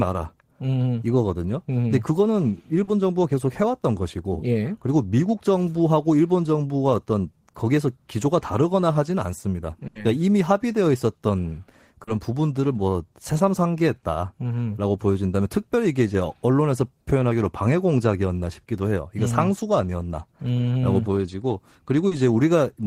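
Short concealed packet loss at 2.83 to 2.90 s: about 40 ms of the speech arrived too late for the decoder, and the receiver patched the hole by extending the sound just before it, pitched where the speech was voiced and noise-like where it wasn't, then crossfaded back into the real signal. It comes across as a brief smear or wobble. The same 40 ms concealment recurs at 12.03 to 12.10 s and at 22.07 to 22.14 s, each a short blip in the flow.

Burst of packet loss at 9.87 to 9.98 s: a run of packets totalling about 80 ms failed to arrive in time. The receiver kept synthesising from the last good sound while turning it down, so a voiced sound becomes a fading held buzz and an unvoiced one a dying hiss. The speech then picks up further along, with those 80 ms gone.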